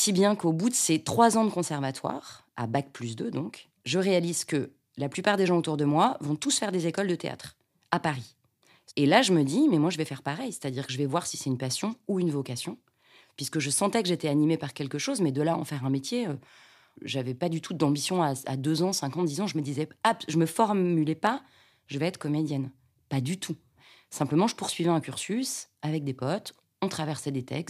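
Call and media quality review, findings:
Single sharp clicks in the speech at 15.85 s and 21.27 s. Likely dropped samples: a fraction of a millisecond missing from the stream, so the waveform steps abruptly from one value to a later one with no audible gap. On a spectrogram each shows as a thin vertical line spanning the full frequency range; on the waveform, a visible discontinuity at each time. Probable component: the capture or playback buffer path losing a few samples.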